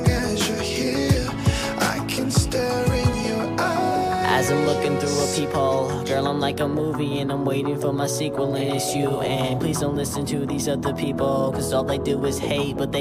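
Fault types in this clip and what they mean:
No faults detected in this clip.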